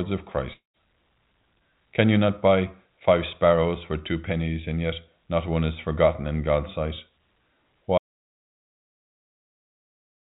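A speech clip heard through a narrowband call path with nothing above 4 kHz, consistent with G.711 A-law at 64 kbps. From 0.53 to 0.77 s there is a long network dropout, likely lost packets. The receiver stretches the last sound into a fading buzz or hiss before about 0.13 s of near-silence, and roughly 0.2 s of speech is missing when the audio resumes. From 7.98 s to the end, an audio dropout to silence cuts the speech abruptly into silence, with no concealment tail and no room tone. This is likely a lost input or a mute, not missing packets.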